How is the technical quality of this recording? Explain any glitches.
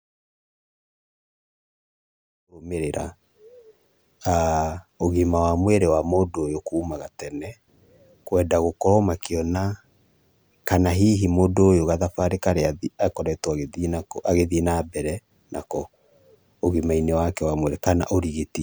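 No technical faults are audible.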